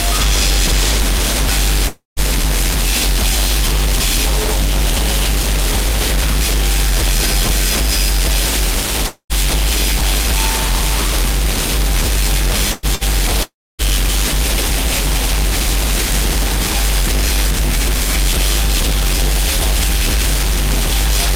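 At 1.87 s the sound turns into a fading smear that gives way to silence, and about 0.3 s of audio is gone when it resumes at 2.20 s. The same happens from 9.07 to 9.33 s, with roughly 240 ms lost and the last 90 ms or so silent. Both are likely a long network dropout. No audio reached the receiver, so it stretched the last sound out, let it decay to nothing, and then picked up further along.

At 12.72 s a brief held tail replaces the audio until 12.86 s, about 120 ms missing with no true silence. A shorter one follows from 12.95 to 13.04 s, losing about 60 ms. These are bursts of packet loss. A run of packets never arrived in time, so the receiver extended the preceding sound and faded it before resuming past the gap.

From 13.43 to 13.82 s what is likely a third long network dropout removes about 360 ms. The concealed sound dies away early, leaving roughly 270 ms of silence before the audio returns.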